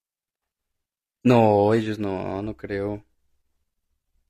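From 0.0 to 2.0 s the speech shows an adaptive stream starting at a low bitrate. The player began on a cheap rendition to start playback quickly, and the sound of it fits HE-AAC at about 20 kbit/s: the treble is thin and synthetic, and coding artefacts are stronger. At 2.0 s quality jumps with no gap to what sounds like AAC-LC near 96 kbit/s, with the band reaching about 14.8 kHz.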